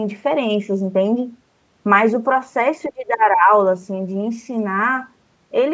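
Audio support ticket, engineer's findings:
Speech suppressed in double talk, 2.87–3.51 s. Near-end level dips by about 20 dB, roughly 0.7 s affected. Likely the echo canceller misjudging simultaneous talk as echo and attenuating the talker. Waveform shows a sudden envelope trough. Spectrogram shows a thinned band with upper harmonics fading. Content stops at 8 kHz throughout from the call microphone processing, which fits 16 kHz sampling.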